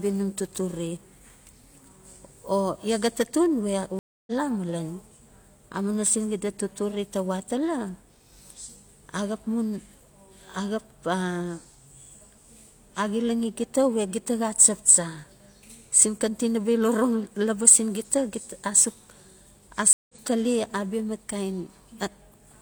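Twice the connection drops and the player reconnects, starting a fresh decoder partway into a live stream. Each stream reconnect leaves a gap of silence, then the sound resumes further along than where it stopped. The first, from 3.99 to 4.32 s, is 281 ms of silence, and the sound resumes roughly 0.3 s later. The second, from 19.93 to 20.14 s, is 164 ms of silence, resuming about a tenth of a second ahead.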